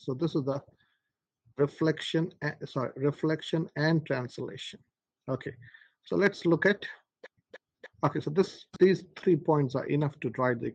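No technical faults can be heard anywhere in the audio. Nothing in it calls for a timestamp or any comment on how it was captured or handled.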